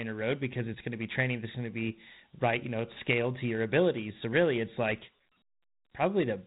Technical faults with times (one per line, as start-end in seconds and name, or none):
0.00-6.47 Dialogic VOX ADPCM